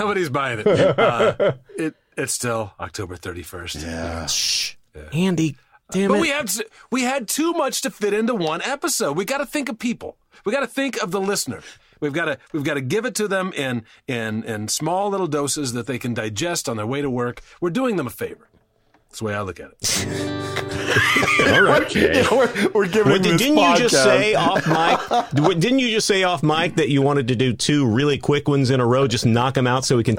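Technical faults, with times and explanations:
Nothing in here trips any alarms; there are no technical faults to point to anywhere along the way.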